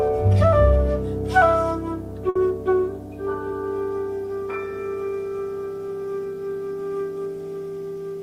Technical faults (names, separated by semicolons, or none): burst of packet loss